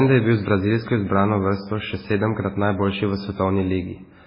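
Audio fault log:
Throughout: MP3 compression. The speech has nothing above about 5.3 kHz and a heavily watery, swirling texture, with sibilants turning metallic and chirpy and onsets smeared. This is likely an MP3 encoder starved of bits, which fits a very low rate around 16 kbps: it cuts the treble at a fixed point and drops weak frequency lines that flicker between frames. A spectrogram would show a flat ceiling at 5.3 kHz and patchy, blocky holes beneath it.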